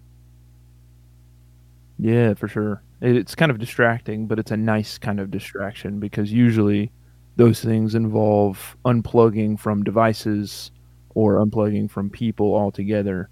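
A steady low drone sits under the speech from start to finish, a 60 Hz tone roughly 30 dB below the speech level. This is mains hum, where a ground loop or a nearby transformer leaks the power-line frequency into the signal path.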